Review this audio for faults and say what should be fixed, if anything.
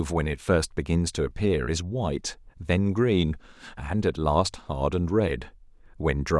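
No faults can be heard anywhere in the speech. Nothing needs fixing.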